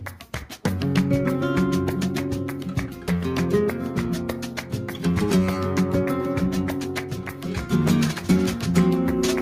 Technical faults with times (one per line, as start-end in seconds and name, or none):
none